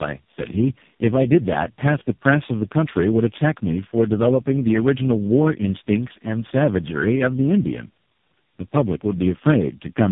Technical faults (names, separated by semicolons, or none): tandem speech coding